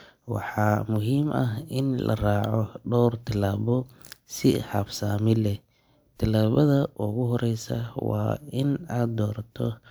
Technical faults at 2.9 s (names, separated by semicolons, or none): none